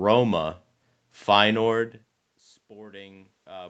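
From 2.74 s to the end at 3.69 s, automatic gain rising: after the input fell by about 21 dB, the gain control gradually raised its gain, so the speech and the room noise behind it swell up together over that last second.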